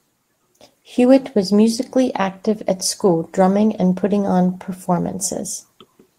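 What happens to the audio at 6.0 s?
Around 6.0 s the audio is still being edited. This is the tail of the repeated timing corrections that run from 0.13 s to 6.09 s, playing the sound at roughly 104 percent of its natural rate. The receiver keeps trimming short pieces out of the stream, all in the same direction but at uneven spacing. Each cut is tiny.

Behind those edits is clock drift between sender and receiver, present across the whole clip. The sender's audio clock runs about 4 percent fast, delivering samples quicker than the receiver plays them out. Its jitter buffer keeps filling up, and to stop it overflowing the receiver discards fragments whenever the backlog grows, giving the irregular timing corrections that run until 6.09 s.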